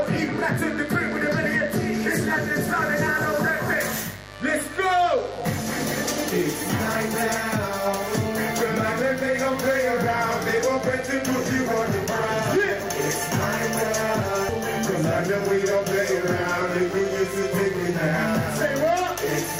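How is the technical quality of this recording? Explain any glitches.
There's one problem, and it runs the whole way through: a steady, raspy mains buzz at 50 Hz, roughly 20 dB under the audio. Switching spikes twice per mains cycle spray harmonics up into the kilohertz range.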